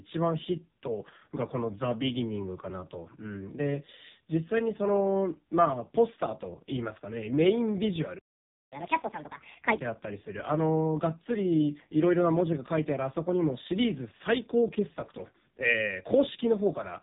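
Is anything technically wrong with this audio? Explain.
Yes, two things. The whole clip has gone through the AMR narrowband mobile codec, and there's a short catch-up at higher speed partway through.

The AMR-NB coding runs from start to finish, and it's heavy. This codec rebuilds speech from a small vocal-tract model fed by a handful of pulses per 5 ms subframe, so the voice comes out buzzy and synthetic. There's nothing above about 3.8 kHz, so it's dull and phone-like. That degree of damage fits the lowest AMR mode, around 4.75 kbps.

Then from 8.72 to 9.77 s the playback speeds up to 1.5 times normal. That's what a player does after a stall: it resamples the backlog to win back lost time. Because it's resampling rather than time-stretching, pitch rises with speed, here by roughly seven semitones. So for about a second the speech sounds hurried and chipmunk-ish, then snaps back to normal rate and pitch.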